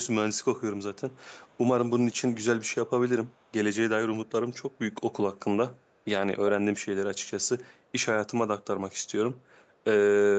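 Faint, delayed scraps of the speech surface five times, at 0.95 to 1.18 s, 1.35 to 1.59 s (slightly louder than the rest), 3.26 to 3.52 s, 5.87 to 5.98 s and 9.62 to 9.76 s. Each trails the original by about 312 ms and sits roughly 35 to 40 dB below it. This is echo leak, likely from a far end playing the call on a loudspeaker whose echo canceller let part of the returned sound through.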